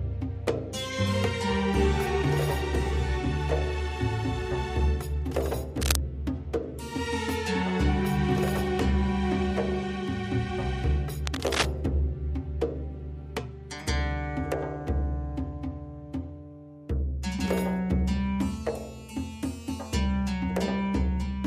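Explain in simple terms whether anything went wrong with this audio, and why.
Two short bursts of cable scratch noise occur, from 5.81 to 5.97 s and from 11.26 to 11.66 s. They sound like scratchy rustling. The first is as loud as the sound itself, and the second is a little quieter. The likely cause is a worn cable or plug being moved.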